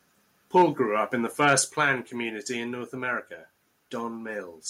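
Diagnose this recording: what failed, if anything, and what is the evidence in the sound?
Harsh crackle at 0.56–0.62 s and 1.48–1.6 s, the second just before "planned community in". The waveform shows flat-topped peaks, driven about 2–3 dB over the converter's limit, likely microphone overload at the converter.

Level drops by about 2 dB at 0.62 s and about 3 dB at 1.62 s, right after each distorted peak. The envelope steps down abruptly, likely microphone volume stepped down by call processing.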